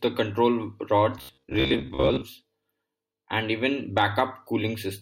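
From 1.18 s to 2.23 s, just after "the control", new audio was likely arriving too seldom, so playback filled the gaps by looping a roughly 15 ms slice, replacing about half of the real signal. This is robotic sound from repeated short buffers: the looping imposes a fixed 66.7 Hz pitch, and the speech becomes a hard, metallic buzz that still loosely tracks the speech rhythm while the skipped portions are lost.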